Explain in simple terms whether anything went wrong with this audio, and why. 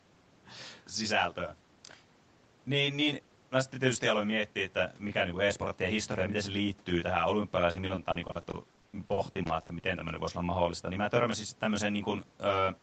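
Two things went wrong. Throughout, a channel delay (comb filtering) of roughly 20 ms makes the speech sound rough or slightly doubled, unlike echo, which repeats audibly.

From 7.71 to 9.85 s, repeated packet loss (robotic sound) leaves about twenty short holes, up to 60 ms, patched with copies, so speech turns choppy with pieces missing rather than briefly silent.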